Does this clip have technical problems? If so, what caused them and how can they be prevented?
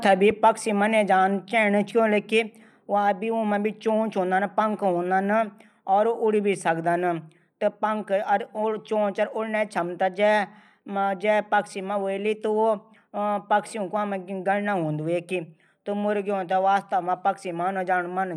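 Yes. Between 0.30 and 0.50 s, right after "थै भी" and just before "मने जाणू चैणू", there is a loud pop: two sharp thumps in quick succession, peaking a little above the level of the speech, which continues underneath them. The likely cause is a sudden voltage step or pulse, from a plug being moved, a switch, a static discharge or a driver glitch, that entered the signal chain. Securing connections and avoiding switching equipment or touching cables while recording would prevent it.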